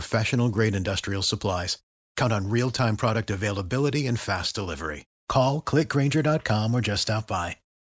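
A steady buzz at 50 Hz runs under the speech from start to end, sounding only while speech is present. The resampler restarted on every block, so each 20 ms block edge carries a small error, which fits a conversion from 24 kHz to 16 kHz.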